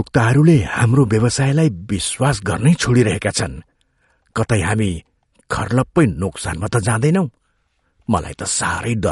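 MP3 compression, throughout the speech: nothing survives above 11.2 kHz, and the damage is plainly audible, with a watery, swirling texture and a smeared edge on sibilants and consonant attacks. This is likely MP3 coding at a low rate, roughly what a 48 kbps stream would give. Short of bits, the encoder drops the whole treble band above a fixed frequency and discards quieter spectral detail. That detail flickers in and out between frames, producing the swirl.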